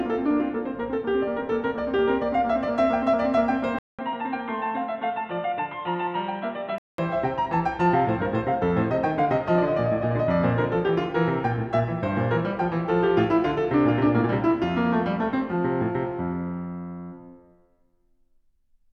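Input switched to a poorer device, from 3.79 to 6.98 s. After a 200 ms silence, the music turns dull and boxy, with nothing above 4.1 kHz. It drops a few decibels and gains a faint new hiss, likely from a lesser microphone taking over, until it clears again.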